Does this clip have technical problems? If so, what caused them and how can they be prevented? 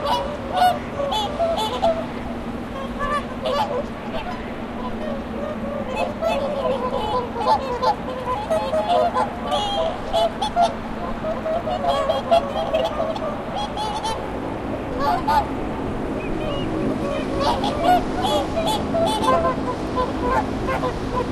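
No, no technical faults can be heard anywhere in this recording of sounds. With nothing gone wrong, there is no cause to trace and nothing that needs preventing.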